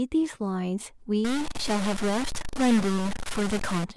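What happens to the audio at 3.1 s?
At 3.11 s there's a sudden jump forward in the speech, most likely a dropped buffer (overrun): about 20 ms never got read before being overwritten, so the two sides butt together. That lands inside a longer stretch, from 1.25 to 3.84 s, of distortion, with pauses filling with noise, which is likely a stuck bit knocking about half the sample values off by that bit's weight.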